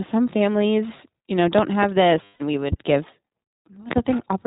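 The whole clip carries iLBC codec damage: nothing above 4 kHz, and a rough, synthetic edge to the speech that points to the 15.2 kbps, 20 ms-frame mode. From 1.58 to 1.86 s two sharp pops, about 15 dB above the speech, sit on top of it, likely electrical voltage steps rather than dropouts, since the voice continues underneath. At 2.24 to 2.42 s, lost iLBC frames leave about 160 ms of held, buzzy vowel, which fits eight 20 ms frames, before the speech snaps back cleanly. Another loud pop lands at 2.72 to 2.75 s, and a double pop at 3.91 to 4.00 s.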